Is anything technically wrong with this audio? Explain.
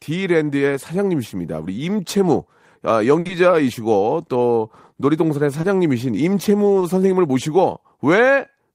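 Yes, the speech has dropouts from network packet loss.

From 3.19 to 3.27 s there is a burst of packet loss: the sound stalls, holding the last moment of speech and fading it away, then jumps ahead. About 60 ms of the original audio never arrived, so the receiver extended the final received sound, lowering its level as the gap lengthened, then resumed with that stretch gone.

Short concealed packet loss follows directly at 3.27 to 3.31 s, and recurs at 5.61 to 5.65 s and 6.79 to 6.83 s. Each is a brief smear or wobble in the speech, where a short sound like a consonant may disappear. Each time about 20 ms failed to reach the decoder in time, and the receiver bridged it by continuing the preceding sound before blending back into the real signal.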